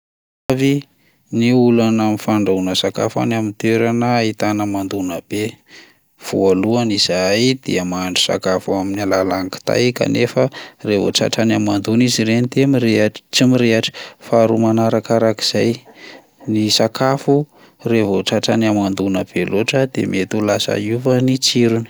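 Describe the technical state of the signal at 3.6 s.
At 3.6 s the signal is intact, with no audible technical fault at that point.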